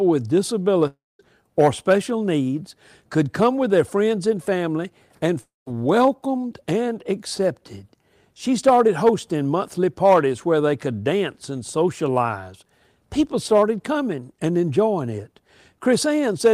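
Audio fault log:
0.87–1.21 s and 5.41–5.68 s, long network dropout: the sound smears into a fading buzz, then about 0.2 s of silence, and roughly 0.3 s is simply gone. That's likely lost packets being concealed.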